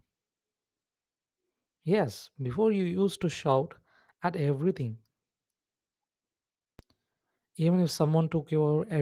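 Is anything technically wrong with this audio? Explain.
Yes, there are two DC steps: the waveform's zero line jumps suddenly at 3.22 s, between "before you used" and "to shout at everything", and again at 6.79 s. Each jump lands as a low thump, and the offset then drains away gradually, as if through a roughly 2 Hz high-pass. The light Opus voice coding on the clip is separate from these thumps.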